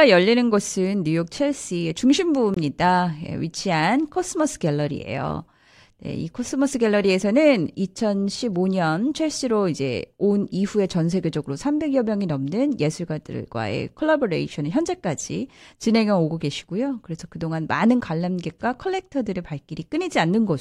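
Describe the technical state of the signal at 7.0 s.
At 7.0 s the speech signal is intact, with no audible technical fault at that moment.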